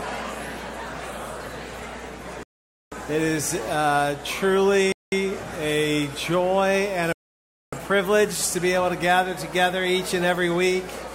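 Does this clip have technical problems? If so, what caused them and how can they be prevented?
Yes. Three rebuffering stalls occur, at 2.43–2.92 s, 4.92–5.12 s and 7.13–7.73 s. Each time, the player exhausted its downloaded audio and fell silent. Sound resumes exactly where it stopped. Nothing is lost, but 0.49 s, 0.2 s and 0.6 s are added. A larger playback buffer or faster, steadier delivery would prevent this.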